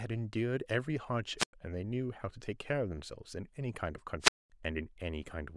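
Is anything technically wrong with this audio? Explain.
Yes. This speech clip has two wireless microphone squelch dropouts, at 1.38 to 1.53 s and again at 4.20 to 4.50 s. In each case the radio link from the analogue FM mic fades, static creeps up, and the receiver's squelch shuts the output off. You get a gap of near silence, about 98 ms the first time and about 218 ms the second, and then the sound comes back in.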